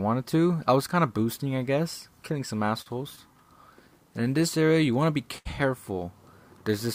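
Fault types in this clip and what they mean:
Short stall from a late packet: a packet arrived after its playout time, so the jitter buffer ran dry and the receiver stretched the last sound until the packet turned up, then carried on from the same point. The sound hangs for 45 ms at 2.81 s and for 73 ms at 5.38 s. Unlike a lost packet, nothing afterwards is skipped or replaced; the playback simply falls behind by the held amount each time.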